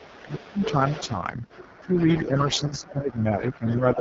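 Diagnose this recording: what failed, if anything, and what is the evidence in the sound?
The codec stage failed. The whole clip sounds rough and raspy, the heavy damage of AMR wideband (HD Voice) at its lowest rates. Nothing sounds above 7.5 kHz. The grit fits about 6.6 kbit/s, where the pulse model cannot follow the speech.

Call processing shows speech suppressed in double talk. The talker drops by roughly 25 dB from 0 to 0.58 s, and by about 10 dB from 1.81 to 2.36 s and from 2.69 s to the end. The echo canceller likely could not separate the two talkers and turned both down.

The same stage lets the other side's voice leak through. A second voice sits about 15 dB under the talker from 0 to 3.16 s and again from 3.5 to 3.96 s. This is likely loudspeaker echo that the canceller failed to remove.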